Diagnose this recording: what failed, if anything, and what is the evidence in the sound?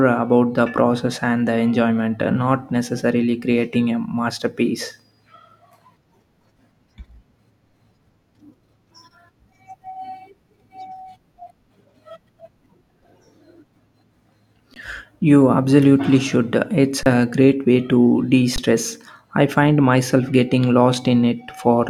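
The output buffer underran three times, each an underrun with held sample: 14.74–14.76 s, 17.03–17.06 s before "great way to de", and 18.56–18.58 s after it. The converter held its last value, so the waveform goes flat and the spectrogram shows a blank strip. Roughly 20–30 ms of speech is lost each time.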